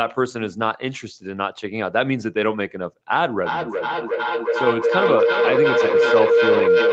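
From 3.42 s to the end, a mic-to-speaker loop builds into feedback howl near 500 Hz. Its repeats come roughly every 0.4 s and it peaks about 4 dB above the speech, showing on a spectrogram as a steadily brightening horizontal band.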